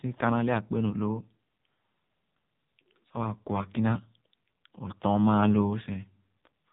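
From start to finish, the speech carries heavy AMR narrowband mobile codec damage. Nothing passes above about 3.8 kHz, so it sounds muffled and phone-like. The vocal-tract model, driven by sparse pulses, makes voices buzzy and synthetic, which points to a low AMR-NB bitrate near 5.9 kbps.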